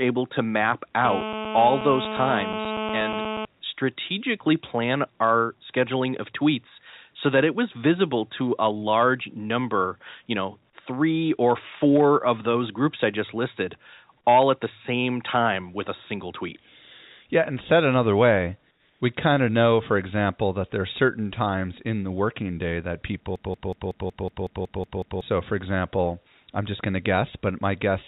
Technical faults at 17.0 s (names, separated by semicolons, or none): none